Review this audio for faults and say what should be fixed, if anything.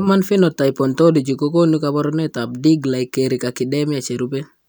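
No faults turn up in this audio, so nothing needs to be fixed.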